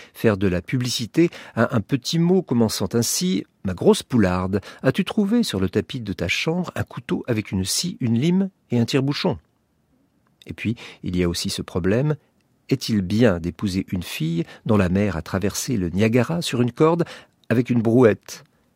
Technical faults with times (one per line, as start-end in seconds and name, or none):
none